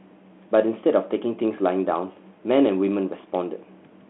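No faults: the speech sits in a telephone band of about 200 Hz to 3.4 kHz, as expected of the link carrying it.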